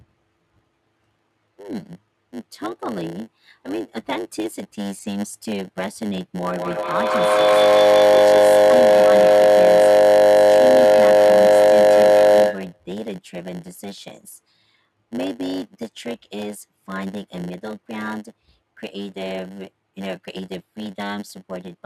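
From start to finish a block size mismatch (padded) zero-fills each block, adding a 100 Hz buzz and slowing the speech to 0.919 times its speed.

From 6.44 to 12.91 s a feedback howl builds near 500 Hz, pulsing about every 150 ms and peaking about 13 dB above the speech. Unlike echo, its repeats grow instead of fading.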